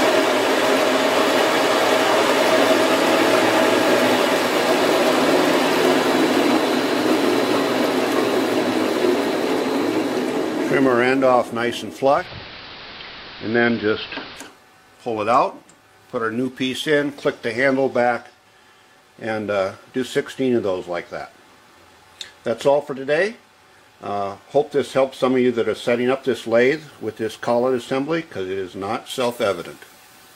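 At 12.13 s the sound drops into a digital radio blending to analogue episode, which lasts until 14.48 s. The receiver lost its digital stream and cross-faded over roughly 151 ms to the station's AM broadcast, then came back. You hear the level shift by about 3 dB, and a layer of hiss sits around 20 dB below the programme while the analogue side is in play.

From 25.85 s to 27.85 s there's USB whine: a fixed-pitch tone built on 1 kHz, which fits the 1 ms frame rate of USB traffic leaking in through power or ground. The strongest component is up at the 20 kHz harmonic rather than the fundamental. The whole thing sits at roughly 40 dB below the signal, a whine riding under the sound for those two seconds.

Then at 29.10 s, running right to the end, it's pre-emphasis left on. The treble boost matching the FM 50 µs curve was applied and never undone, so 10 kHz comes out about 10 dB hotter than 1 kHz. 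That tilt is what makes the last stretch sound thin and overly bright: the top end is pushed forward against everything below it.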